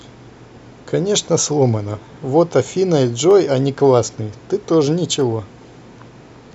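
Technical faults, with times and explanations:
2.31 s, 3.31 s and 5.21 s: dropped samples. Each sharp click is likely a tiny fraction of a millisecond missing, making the waveform jump and leaving a thin vertical spectrogram line.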